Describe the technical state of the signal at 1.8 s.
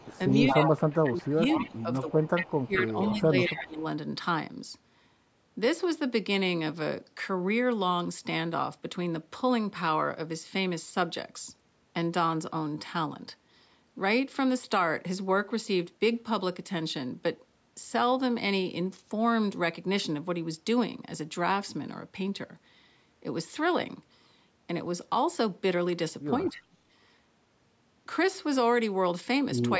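At 1.8 s two faults overlap. The first is speech suppressed in double talk, running from 1.02 to 3.83 s. Both sides were likely talking at once, and the echo canceller, unable to tell this talker apart from the loudspeaker echo, pulled the level down on everything it picked up. The sound dips in and out, falling by about 15 dB at its deepest, with roughly two seconds affected across that span.

The second is an echo leak from 1.49 to 1.83 s, so 1.8 s falls at its very end. On the side playing the call through a loudspeaker, the echo canceller likely failed to clear all of the loudspeaker sound reaching its microphone, and that residue was sent back. It arrives as a delayed copy trailing the original by 221 ms, sitting about 10 dB below the main signal. It is heard as a repeat of the voice layered under the attenuated speech.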